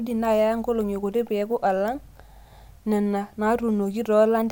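No technical faults can be heard anywhere in this speech recording.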